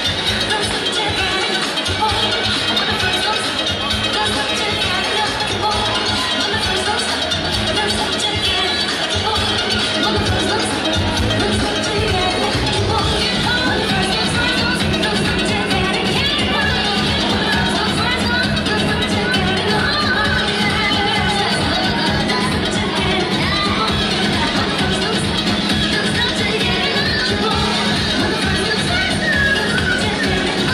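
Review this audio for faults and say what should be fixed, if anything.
Nothing to fix: no faults were heard in the audio, so no corrective action is needed.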